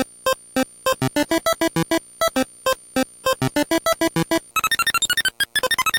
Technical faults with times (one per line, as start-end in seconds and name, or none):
4.51-5.99 section at the wrong speed